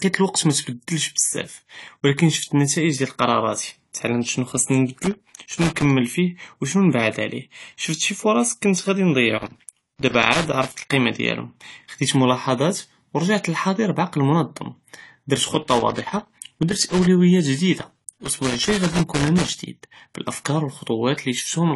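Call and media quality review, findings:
Speech band dull and smeared throughout, with fizzy, warbling texture on sibilants and sustained vowels; nothing above 11.5 kHz. Likely AAC compression (AAC-LC) at low bitrate, sound consistent with about 32 kbps: coarse quantisation of frequency lines, lowered cut-off, spectral holes.

Loose connector crackle, three irregular bursts: 4.95–5.90 s, right after "תעלמת שנו חסני"; 9.38–10.93 s; 17.79–19.59 s, just before "בלאפכאר ו". Probable worn or dirty contact in the cable or jack, making and breaking under movement, chopping the signal into scratchy pops.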